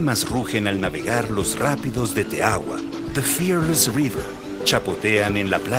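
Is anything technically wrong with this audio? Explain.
No, there is nothing technically wrong with this audio.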